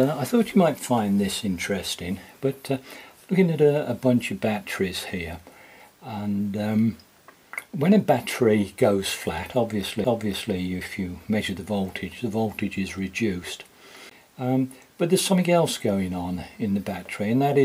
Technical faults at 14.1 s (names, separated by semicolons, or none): CD skip